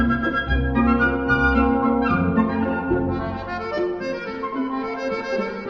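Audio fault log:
Nothing to log here; I listened all the way along and didn't hear a single thing go wrong with the sound.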